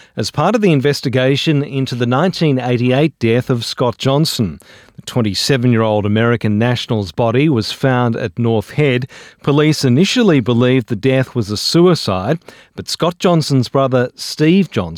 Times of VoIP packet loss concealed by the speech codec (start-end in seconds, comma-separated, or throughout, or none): none